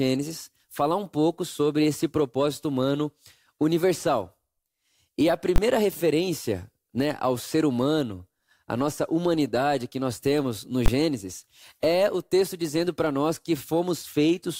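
A calculation in the processing chain broke down twice and returned infinite or invalid numbers, which were clamped to full scale: invalid numbers at full scale. Each time the output was pinned at one extreme value for a 20 ms block, from 5.56 to 5.58 s, just before "referência né ao ser", and from 10.86 to 10.88 s, right after "que nós temos no". Because each block is so short, the jump to full scale and back merges into a single sharp, very loud bang cutting through the speech.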